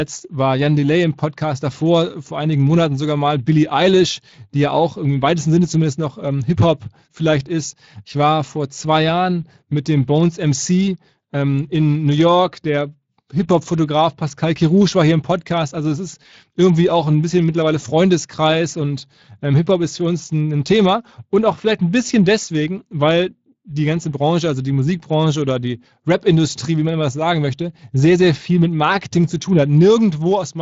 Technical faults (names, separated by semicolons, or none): Speex codec